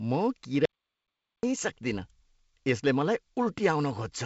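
A speech recording with an audio dropout to silence from 0.65 to 1.43 s, roughly 780 ms where the sound cuts to silence with no room tone. That's likely a lost input or brief mute while the recorder kept writing, with the G.722 band limit near 7.7 kHz heard on either side.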